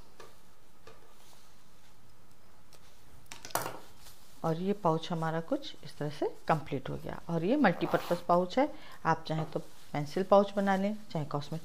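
The audio shows no technical faults at any point, with the signal holding steady and intact throughout.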